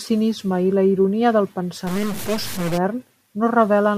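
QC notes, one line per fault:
1.87–2.78 s, stuck bit: right after "i la ironia del" the speech turns harsh and buzzy, and the gaps fill with noise. A data bit is likely held at a fixed value, so samples jump by a step of roughly -25 dBFS.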